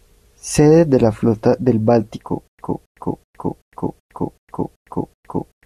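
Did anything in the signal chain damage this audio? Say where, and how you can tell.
Yes: from 2.48 s to the end, a 270 ms burst of speech repeats eight times, 110 ms of dead silence between, the stutter with silent gaps of a likely stalled playback buffer.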